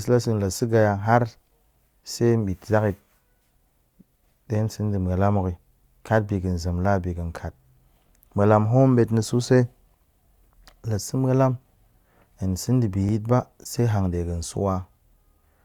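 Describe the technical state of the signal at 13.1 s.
A brief stutter and click at 13.09 to 13.11 s, just before "yit ba se hanɗe", where about 20 ms of the speech plays twice. This is an overlapping chunks fault: the audio is handled in 5 s blocks, and the block starting at this join begins 20 ms before the previous one ended. That sliver is therefore repeated back to back, and the discontinuity at the seam produces the audible tick and hiccup in the flow of speech.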